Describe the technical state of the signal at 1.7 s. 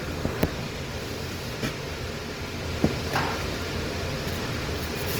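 At 1.7 s the sound carries Opus compression damage, present across the whole clip rather than just this moment. The likely cause is a low-rate Opus encode in its music mode, which fits roughly 24 kbps. That mode preserves each band's energy and fills starved bands with folded or noise content, so tones here turn grainy and rough instead of swirling. Unlike MP3, there are few watery spectral holes, and the top end stays open to about 20.3 kHz.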